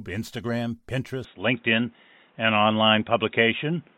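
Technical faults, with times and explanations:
1.25–3.98 s, input switched to a poorer device. At 1.25 s the speech turns duller and boxier, with no gap at the change. From then to the end, nothing comes through above 3.8 kHz. The level shifts by roughly 5 dB. A new background noise sits about 40 dB below the speech. The likely cause is the recording moving to a different, narrower-band microphone or a headset call profile. That device brings its own tone, level and noise.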